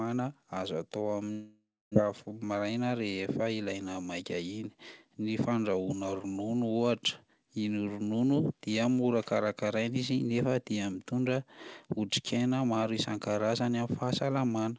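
Right after "azo atao", from 1.32 to 1.98 s, the speech dissolves into a buzzy or hissy continuation that fades out, followed by about a quarter second of silence before it resumes with roughly 0.6 s of it gone. This is likely a long network dropout, with the receiver filling the gap.

From 2.02 to 2.40 s the speech drags at about 92% speed without any change in pitch, sounding drawn out. This is a jitter buffer slow-down: the receiver repeated short pitch periods, adding 37 ms to rebuild its reserve. Through the G.722 call path, nothing is heard above 8 kHz.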